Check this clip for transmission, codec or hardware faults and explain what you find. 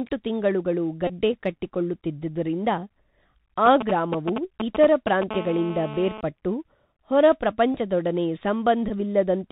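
The speech in this clip carries four kinds of fault: a narrowband headset codec throughout, three short repeated-packet buzzes, and interference from a nearby 2G phone.

The Bluetooth CVSD headset codec is plainly audible from start to finish. The band stops at 4 kHz, so the speech sounds muffled and telephone-like. The one-bit delta modulator, consistent with a 64 kHz CVSD link, cannot track fast high-frequency swings. S sounds turn scratchy, loud bright passages distort, and a granular hiss sits under the speech.

Bluetooth headset packet repeated occurs at 1.07–1.13 s, 7.72–7.76 s and 8.88–8.91 s. When voice packets are lost, the chip decodes the previous packet's bits again. Each repeat lasts 3.75 ms, so a run of repeats turns into a short, steady buzz near 267 Hz. The first gap loses about 22 ms, which fits six packets. The second is scattered over about 38 ms, with its longest run around 20 ms. 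The third loses 15 ms.

GSM signalling bursts run from 3.66 to 5.31 s, roughly 5 dB below the speech. A nearby 2G phone is exchanging short groups of radio bursts at about 217 Hz, as it does during call setup. The audio circuitry rectifies these pulses. The result is a galloping dit-dit-dit of brief raspy buzzes that has no relation to the speech.

GSM phone buzz follows directly, from 5.31 to 6.21 s, about 12 dB below the speech. Here the phone is in a call and transmits continuously in 217 Hz bursts. Rectification of those bursts yields a hard, steady buzz at 217 Hz with a dense stack of harmonics. It sits on top of the speech and stops at 6.21 s.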